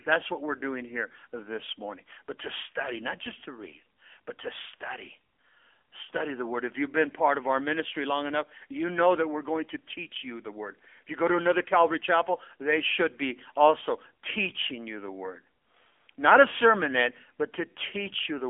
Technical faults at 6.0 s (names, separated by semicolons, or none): AMR narrowband mobile codec